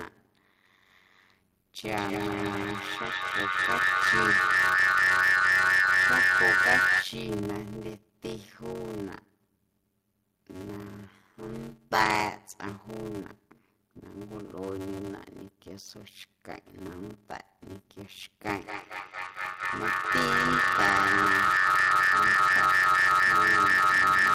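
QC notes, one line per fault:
throughout: block size mismatch (padded). A steady buzz at 93.8 Hz sits under the speech, and everything plays at 0.625 times normal speed while keeping its natural timbre. The buzz rate fits a 512-sample read block in which only about 320 samples carry audio. The remainder is zero-filled, so a short silent gap lands in every block. Those regular gaps produce the buzz and stretch the timing.
1.97–7.17 s and 18.53–24.34 s: feedback howl. Two devices in the same room on one call form a loop, and each trip through it adds gain. The repeats grow instead of decaying and narrow toward the frequencies the loop favours. The result is a tone of about 2 kHz in the first run and around 1.5 kHz in the second, peaking about 8 dB above the speech, with a loop delay of roughly 150 ms. The second run lasts to the end.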